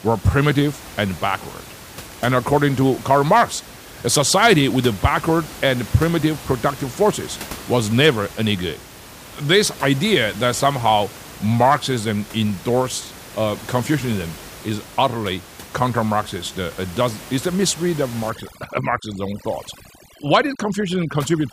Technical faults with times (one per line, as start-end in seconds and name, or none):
18.30-21.53 overdone noise removal